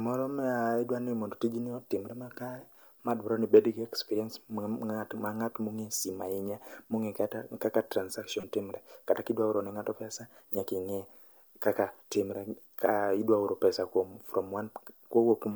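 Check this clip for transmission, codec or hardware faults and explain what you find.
One transmission fault is audible. At 8.40 to 8.44 s, just after "kata kaka", a corrupt frame was decoded: flipped bits misplaced spectral energy across roughly one frame, giving a brief burst peaking near -30 dBFS.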